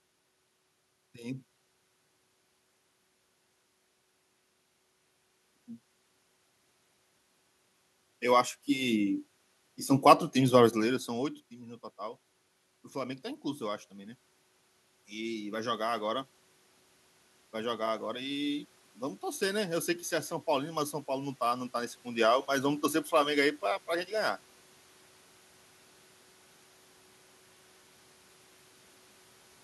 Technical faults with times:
11.07-16.32 automatic gain rising

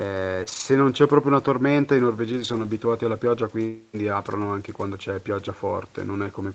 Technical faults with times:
0.43-0.48 short concealed packet loss
0.48-0.62 lost packet rebuilt from error correction
2.24-2.66 lost packet rebuilt from error correction

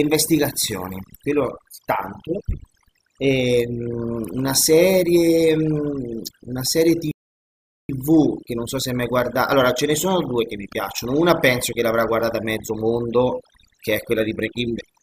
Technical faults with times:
0.00-15.02 overdone noise removal
7.11-7.89 rebuffering stall

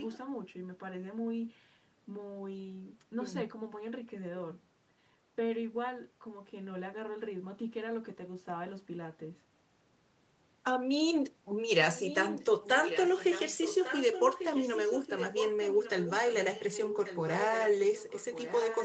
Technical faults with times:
0.00-0.18 echo leak
11.90-18.84 echo leak

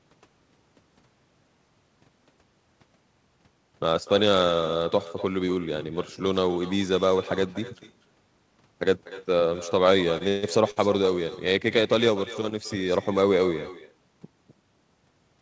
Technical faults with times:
0.00-15.41 echo with no canceller
10.18-10.22 short stall from a late packet
10.28-10.45 call audio freeze
10.71-10.78 short stall from a late packet
12.49-12.53 short stall from a late packet

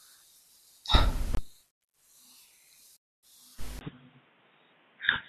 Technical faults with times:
1.33-1.39 corrupt frame muted
3.79-5.29 input switched to a poorer device

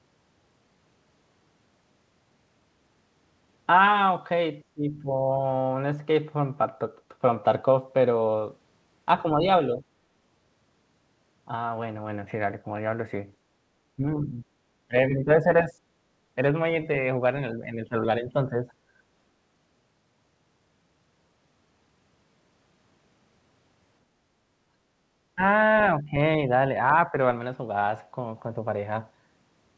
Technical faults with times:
4.74-5.30 speech suppressed in double talk
9.23-9.82 speech suppressed in double talk
13.96-15.77 speech suppressed in double talk
17.01-18.67 speech suppressed in double talk
24.68-24.81 background gated by the echo canceller
25.35-25.41 speech suppressed in double talk
26.00-26.50 speech suppressed in double talk
27.07-27.18 speech suppressed in double talk

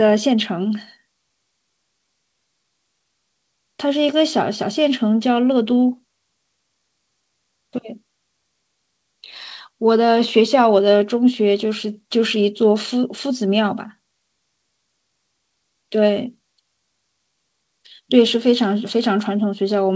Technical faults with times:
none

